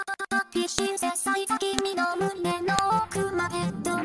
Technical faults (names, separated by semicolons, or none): file header played as audio